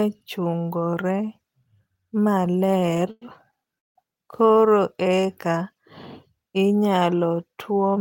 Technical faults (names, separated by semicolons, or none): repeated stalls (stutter); call audio freeze; jitter buffer slow-down; jitter buffer speed-up